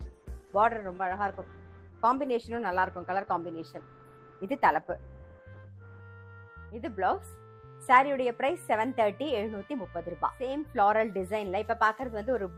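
The audio opens dull and smeared, with the treble either absent or replaced by a hissy, synthetic-sounding top end and obvious codec artefacts, until 6.0 s, when it abruptly turns clear and full with no gap or dropout. This is an adaptive stream starting at a low bitrate: the player began on a cheap version to start quickly, then stepped up after measuring the connection. The sound points to an Opus stream moving from about 16 to 64 kbit/s. On a spectrogram the first 6 s shows a low ceiling or patchy, noise-like high band, then energy suddenly extends upward at the switch, while the waveform runs continuously across it.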